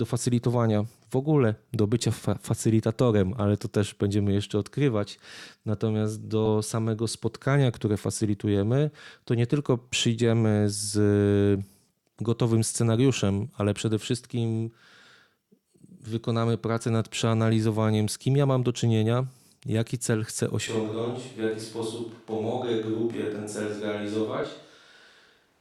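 A speech recording with two kinds of fault. Compressed frames are skipped twice. At 6.45 to 6.48 s, just before "samego spotkania które facylitujemy", the sound jumps ahead by roughly 40 ms. That fits about two missing frames of a codec with 20 ms frames. The same skip recurs at 24.43 s, again roughly two frames. From 20.68 s to the end, after "czynienia jaki cel chcę", the sound abruptly turns hollow and roomy. The bass thins. The level falls by about 5 dB. Background noise rises to about 40 dB below the speech. This points to a switch to a distant microphone, likely because the close microphone's signal dropped out and a farther one took over.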